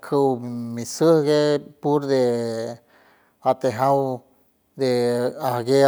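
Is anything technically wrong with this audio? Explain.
No, nothing technically wrong can be heard in this speech recording. Nothing in it points to a fault in how the sound was captured or passed along.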